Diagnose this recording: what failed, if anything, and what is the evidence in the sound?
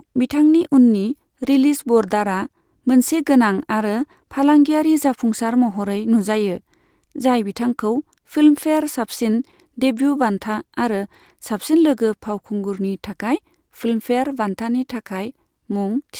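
A lost packet rebuilt from error correction, at the network and codec stage. Around 4.01 to 4.03 s, a roughly 20 ms stretch of the speech turns briefly rougher and noisier with no gap, which points to one lost packet replaced by the lower-bitrate backup copy carried in the next packet.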